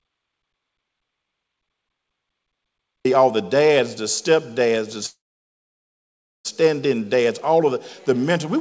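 The clip opens in complete silence, with no room tone, until 3.05 s. This audio dropout to silence likely comes from lost input, with silence written instead.

At 5.06 s a call audio freeze starts. The last sound hangs as a fading buzz or hiss, then about 1.3 s of silence. Audio resumes at 6.47 s with nothing lost, just delayed.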